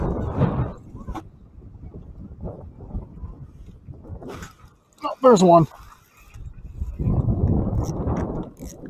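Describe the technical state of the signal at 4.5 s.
A speech-tuned noise suppressor is running on non-speech material throughout, treating steady tones, ambience and tails as noise. Its gain swings by roughly 15 dB, so attacks pass while sustained parts sink, leaving the sound pumping and thinned.

From 4.52 to 5.0 s that suppressor classes the sound itself as noise and pulls it down further, by about 7 dB at the deepest point. The sustained portion dips and its decay is cut short, while sharp onsets mostly survive.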